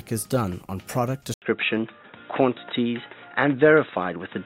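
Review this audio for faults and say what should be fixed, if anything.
At 1.34 s the sound drops out for about 80 ms and comes back duller and boxier, with nothing above 3.8 kHz, a level shift of roughly 5 dB and a new noise floor somewhere around 55 dB below the signal, lasting to the end. That's the signature of the input switched to a poorer device, likely a headset or fallback mic taking over, so everything after the switch runs through its narrower band and its own gain and noise. To prevent it, lock the recording input to the intended microphone and stop the system auto-switching devices mid-session.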